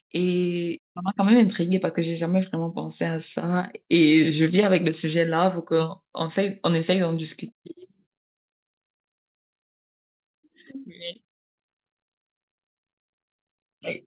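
At 1.08 s the microphone volume was stepped up: the call software judged the input too quiet and raised the device gain in a single jump of about 6 dB. Speech and background noise become louder together, within the telephone-band sound that stops at 4 kHz.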